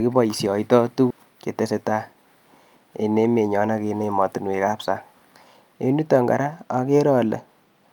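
Around 1.10 to 1.20 s there is a skip ahead. A stretch of the speech stream, roughly a third of a second, was discarded while later audio was already queued, and the playback delay shrank by about the same amount as the player caught up. Nothing was inserted to cover the loss, so the speech on either side is butted together with no gap. The result is an abrupt forward jump, with part of the utterance simply missing.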